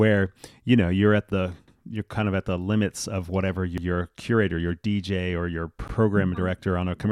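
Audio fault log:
1.68–1.78 s, 3.78–3.88 s and 5.88–5.98 s, overlapping chunks: the audio is handled in 2 s chunks, and each new chunk starts 100 ms before the previous one finished, so that last tenth of a second plays twice. You hear a little stutter right after "know you're at the", again after "the limits of whatever" just before "curator your", and once more after "or your". Each lands at a join, which is why they fall about every 2 s.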